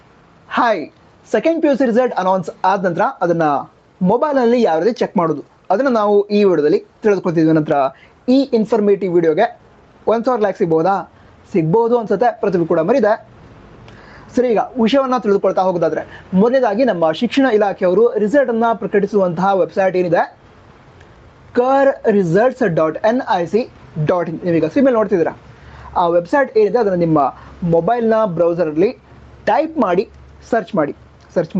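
Gain pumping runs throughout the clip: the level ducks by roughly 10 dB under each loud sound, likely from input gain set far too high with a fast limiter clamping down. The call path's top end stops near 8 kHz, consistent with Opus at a call bitrate.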